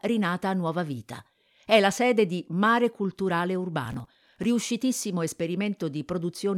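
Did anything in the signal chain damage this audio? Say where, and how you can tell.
Yes. Between 3.85 and 4.44 s the speech picks up a gritty tearing, processor overload crackle at the driver and buffer stage. The processor repeatedly missed deadlines on very short buffers, a few milliseconds each, and some few dozen were skipped outright, so the waveform jumps abruptly at each lost chunk. A spectrogram shows a dense run of thin vertical broadband streaks over that stretch, and the crackle stops once the load eases.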